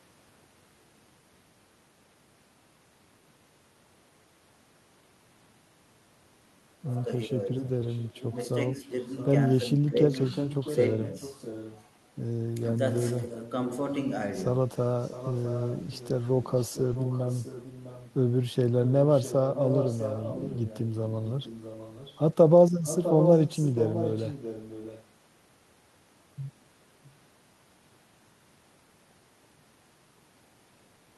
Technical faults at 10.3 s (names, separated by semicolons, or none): echo leak